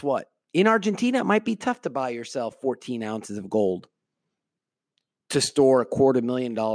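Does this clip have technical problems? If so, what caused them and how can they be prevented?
No, the speech signal stays technically sound throughout, with nothing in it that calls for a cause or a preventive fix.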